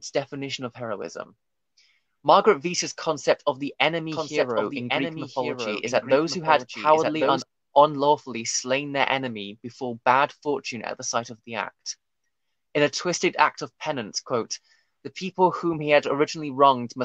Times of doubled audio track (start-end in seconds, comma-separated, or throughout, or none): 4.12-7.42